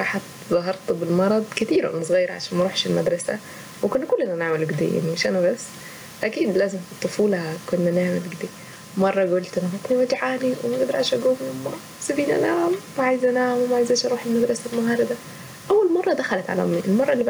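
Gain pumping runs through the whole speech clip: the gain pulls down on each loud syllable, a swing of around 10 dB, with the room noise sitting about 35 dB below the speech. Unlike a noise gate, the gaps get louder rather than silent. The likely cause is input gain set far too high, with a fast limiter clamping down on the peaks.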